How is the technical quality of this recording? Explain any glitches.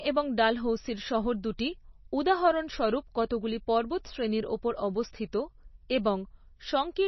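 Quality is poor, with heavy coding damage throughout the speech. The treble stops dead around 5.9 kHz, and the sound is watery and swirling, consistent with low-bitrate MP3 compression, likely around 24 kbps. Starved of bits, the encoder discards the upper band and drops weaker frequency components, which flicker between frames.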